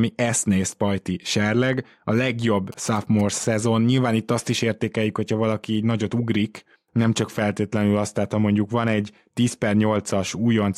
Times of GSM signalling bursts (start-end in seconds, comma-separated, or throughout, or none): 2.72-3.45